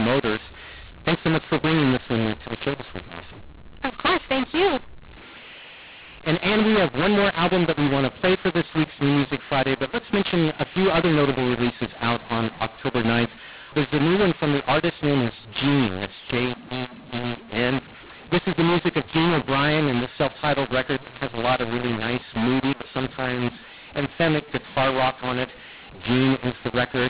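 A mu-law and A-law mix-up runs through the whole of this speech recording. It was encoded with the mu-law curve but decoded as A-law, so each 8-bit code lands on the wrong level. Some samples come out too loud and others too quiet, giving a harsh, gritty distortion, and the quietest codes are pushed well above silence, so pauses fill with noise. The underlying G.711 telephone band still cuts off near 4 kHz, which fits 8 kHz sampling.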